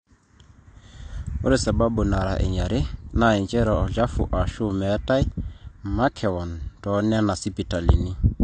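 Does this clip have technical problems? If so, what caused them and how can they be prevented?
Yes. Throughout, the speech sounds dull and smeared, with nothing above 9 kHz and a fizzy, warbling edge on sibilants. The likely cause is AAC compression, which fits 32 kbps AAC-LC discarding the top band and coarsely quantising the rest. Encoding at a higher bitrate would prevent it.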